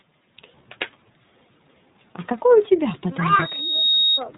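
From the start, the speech carries the sound of the iLBC codec. Nothing above about 3.9 kHz survives, so the audio is narrowband and dull. Each frame's excitation is coded on its own, which gives a slightly rough, synthetic edge that is plainly audible. The rhythm of that roughness fits 30 ms frames at 13.33 kbps. Unlike a plain low-pass filter, this adds a gritty, buzzy texture to the speech as well as the lost treble.

From 3.30 s to 4.24 s there is a loudspeaker feedback squeal. A single tone at 3.8 kHz swells up over roughly half a second and settles a few decibels above the speech. The microphone is picking up the loudspeaker it feeds, and at that one frequency the loop gain exceeds one, so the tone keeps building. A steady interfering whistle would arrive at full level, while this one grows out of the sound before holding.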